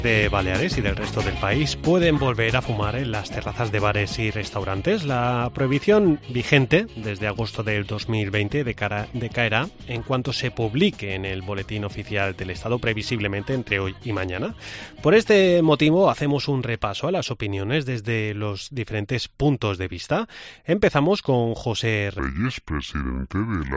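From 22.19 s to the end, a wrong sample rate: playback runs at two-thirds speed, which fits 24 kHz audio played at 16 kHz, dropping pitch about 7 semitones.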